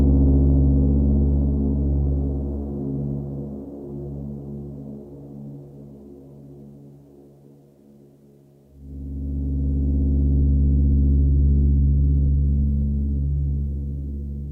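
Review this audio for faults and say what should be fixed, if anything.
Nothing in the recording needs fixing, as no technical faults can be heard anywhere in it. The sounds come through intact, with no breaks or disturbances to address.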